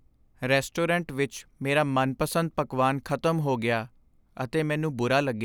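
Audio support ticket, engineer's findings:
No audible faults found on listening to the speech clip.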